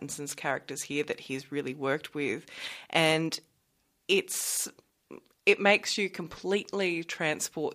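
No technical faults can be heard anywhere in this recording.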